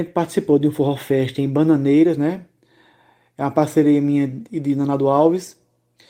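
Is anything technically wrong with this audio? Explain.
Yes. Two short stretches of this speech were lost packets rebuilt from error correction, at about 2.07 s and 5.25 s. Each was a single 20 ms packet that never arrived. The next packet carried a low-bitrate spare copy, and the decoder played that copy, so the audio never drops out. Instead there is a brief patch that sounds rougher and grainier. On a spectrogram it appears as a narrow smeared, noisier column, and the waveform stays continuous.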